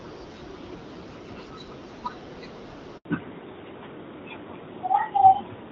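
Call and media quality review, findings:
Handover gap, 2.97 s: 80 ms of dead silence, sound cut cleanly rather than smeared or repeated, so network switch mid-call, not concealment or jitter-buffer underrun.

Fallback to narrowband, 3.05 s to end: nothing above 4 kHz, duller and rougher sound. A sustained codec switch, not a low-pass filter, since the change is abrupt and lines up with the gap. Earlier wideband audio fits AMR-WB around 12.65 kbit/s, with light coding texture.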